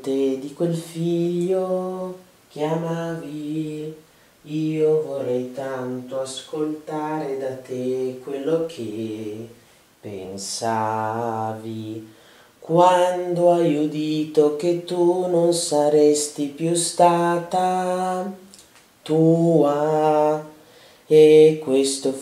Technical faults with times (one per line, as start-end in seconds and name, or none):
none